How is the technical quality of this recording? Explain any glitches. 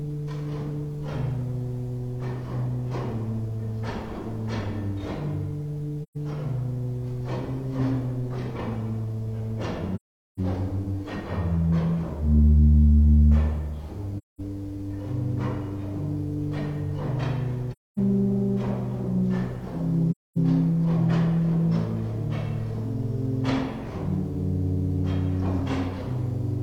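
The recording has AAC frame loss with muting at 6.03, 9.95, 14.18, 17.72 and 20.11 s. The decoder zeroed lost frames, so the sound fades into soft-edged silences of 128 to 427 ms.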